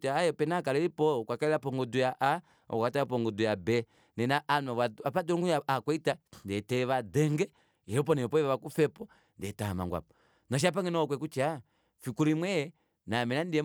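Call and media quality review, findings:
Nothing stood out on listening to the speech in this recording, and there is no finding to log against any component.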